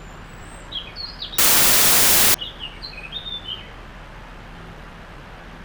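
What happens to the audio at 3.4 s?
Nothing goes wrong at 3.4 s; the sound carries on intact through that moment, with no dropout, click, distortion or other fault.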